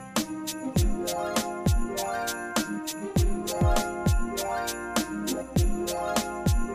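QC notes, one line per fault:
4.01 s to the end: mains hum comes in, a steady 60 Hz drone sitting roughly 25 dB under the sound, with a few low harmonics on top. It's the power line leaking in, probably through a ground loop or a nearby transformer, so it never varies.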